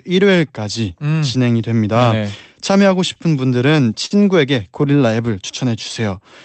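From 2.71 to 4.13 s the speech stutters with repeated stalls. Packets arrived late, so the jitter buffer ran empty seven times. Each gap was bridged by continuing the last sound, 116 ms in total, the longest 51 ms. Nothing is lost. The speech drags and catches.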